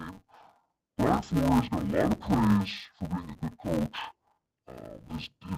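From start to finish, the speech suffers from interleaved audio read as planar. Each short block of alternating left and right samples has been split in half, first half to the left, second to the right. Every block lasts 5.33 ms, which fits a 256-sample block. Because the blocks are so short, there is no clear octave drop. Instead the sound is dull and robotic, with a steady buzz at about 188 Hz.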